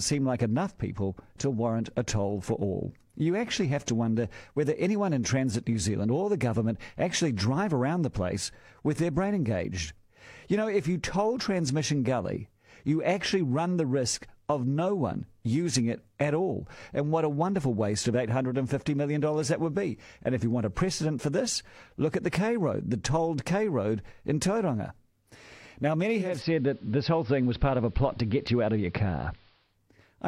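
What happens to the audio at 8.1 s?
Nothing goes wrong at 8.1 s; the speech carries on cleanly through that moment with no dropout, click or distortion.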